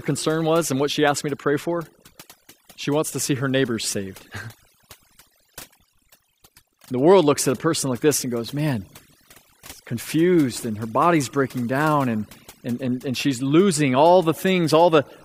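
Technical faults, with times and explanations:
Throughout, overdone noise removal: bands near the estimated noise floor are cut hard, taking quiet speech with them, so the background breaks into twinkling, warbling specks.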